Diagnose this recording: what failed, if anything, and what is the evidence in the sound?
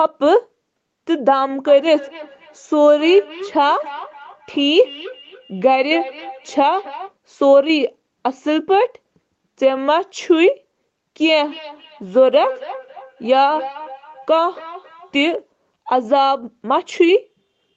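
The failure is a feedback echo between two devices, at the acoustic and call-processing stage. From 1.67 to 7.14 s, and again from 11.43 to 15.36 s, the speech returns at a steady interval of roughly 300 ms. The repeats peak at about 17 dB below the speech and grow thinner with each pass. A second device in the room plays the call aloud. The first microphone recaptures it, and its echo canceller cannot remove audio it never played. The 8 kHz band limit comes from the call path.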